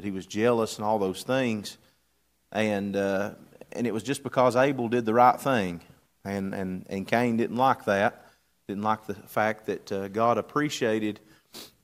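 No technical fault can be heard at any point in the recording.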